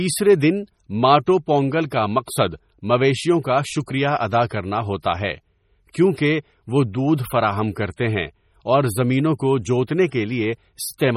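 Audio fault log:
throughout: MP3 compression. Heavy codec damage with nothing above 17.3 kHz, a watery, swirly texture and metallic chirps on sibilants as weak frequency lines switch on and off between frames. This is likely a starved MP3 encode, and the sound points to roughly 32 kbps.
5.94 s: pre-echo. A brief hiss of about 12 ms leads the attack between "ادا کرنا ہوتا ہے" and "کیونکہ وہ دودھ فراہم". The attack sits late in a transform block, so quantisation noise sized for the loud onset spills into the quiet moment before it and softens the onset.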